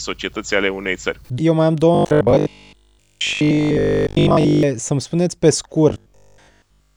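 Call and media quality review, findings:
Robotic sound from repeated short buffers, 1.95–4.63 s and 5.90–6.96 s: speech becomes a rigid metallic buzz at 50 Hz, fitting a repeated 20 ms block. Likely jitter-buffer underrun, with most real audio skipped. Unlike mains hum, the buzz loosely follows the speech.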